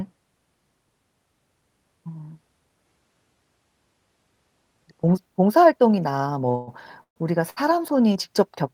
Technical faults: repeated stalls (stutter)

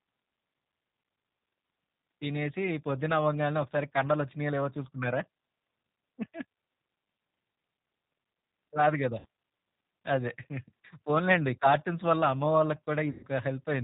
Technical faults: G.729 codec; VoIP packet loss concealed by the speech codec

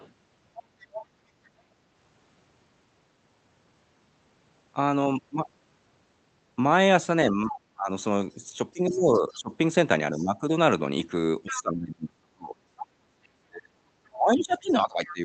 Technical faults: other side's voice leaking through; speech suppressed in double talk

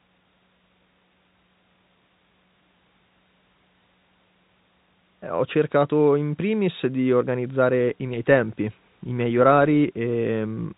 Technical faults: none

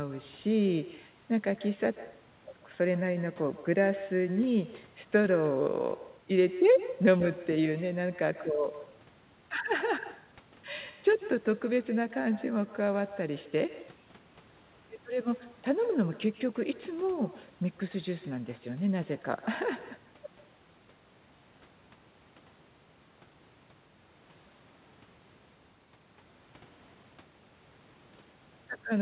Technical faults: echo with no canceller

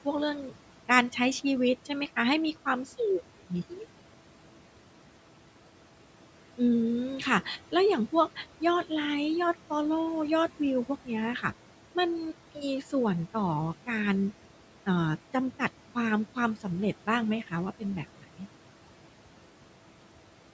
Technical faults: noise suppressor artifacts; speech cut by the noise suppressor

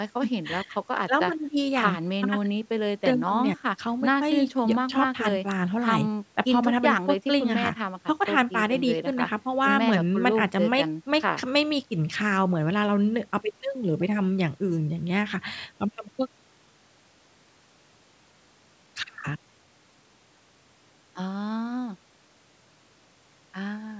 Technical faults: none

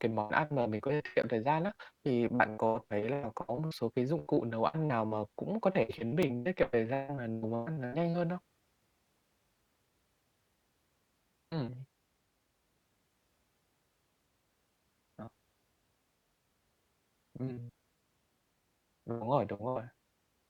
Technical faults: block of digital silence

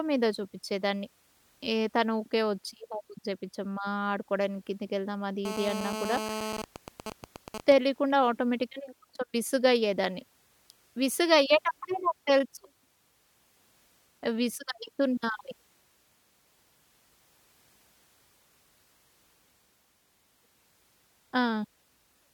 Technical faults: GSM phone buzz; GSM signalling bursts

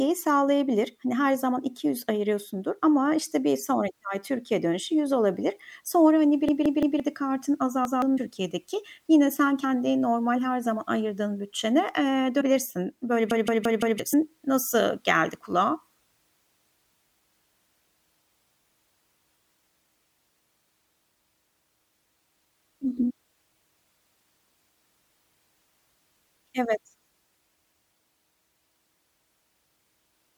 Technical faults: repeated buffer; compressed frames skipped

